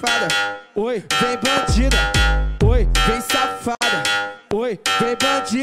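The audio carries two kinds of fault. A loud pop occurs twice. Between 1.57 and 1.65 s there are two sharp pops in quick succession, peaking roughly 10 dB above the surrounding sound. A single harder pop, around 15 dB above it, falls at 4.51 to 4.54 s. The sound continues underneath both. On a waveform each pop is a narrow spike towering over the envelope, perhaps with a brief ringing tail. A spectrogram shows each one as a thin vertical stripe spanning the full frequency range. The likely cause is a sudden voltage step, such as a plug, a switch, static or a driver glitch, entering the signal chain. There is also a gap at a join of encoded pieces from 3.75 to 3.81 s. A 60 ms hole opens in otherwise continuous sound, and the audio resumes exactly where it stopped. This fits separately encoded segments being joined with their encoder start delay and end-frame padding left untrimmed. The waveform falls to a flat line through softened edges and then comes back. 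On a spectrogram this appears as a blank column with smeared edges.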